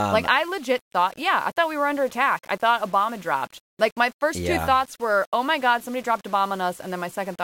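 Low bit depth without dither runs from start to finish in this speech clip. The grainy distortion is likely the result of the signal being rounded to roughly 7 bits with no dither added. The rounding error tracks the signal, sitting around 30 dB below it. Quiet passages and fading syllable tails turn gritty and crackly, and the softest moments sputter or drop out between adjacent steps.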